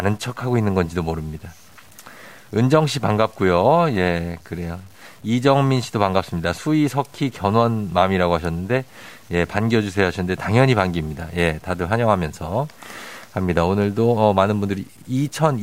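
The speech was likely truncated to 8 bits without dither, so low bit depth without dither runs throughout. The rounding error tracks the signal, around 35 dB below it, making quiet passages gritty and letting the faintest sounds sputter or drop out between steps.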